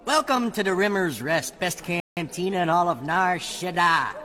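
A short audio clip with one rebuffering stall: at 2.0 s the sound drops abruptly to silence and picks up again at 2.17 s exactly where it left off, so nothing is skipped but 168 ms of dead time is inserted. The player exhausted its downloaded audio and waited for more to arrive. On a waveform this is a flat, silent gap with hard edges; a spectrogram shows a clean vertical blank band across all frequencies.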